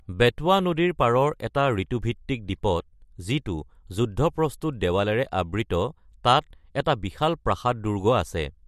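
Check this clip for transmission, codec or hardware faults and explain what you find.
One hardware fault is present. From 5.21 to 7.50 s there is sample clock jitter. The converter clock wanders by under a microsecond, so steep parts of the speech pick up a faint roughness roughly 45 dB down.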